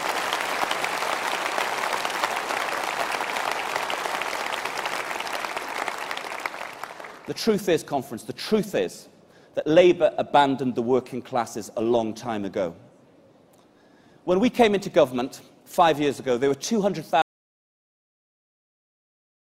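At 17.22 s the sound cuts off abruptly and never returns, leaving about 2.3 s of audio dropout to silence running to the end of the clip. The gap is complete silence with no room tone or noise floor, which points to the input likely being lost, through a disconnect, failed link or mute, while writing continued. On a waveform it is a flat line; a spectrogram shows a sharp vertical edge followed by solid black.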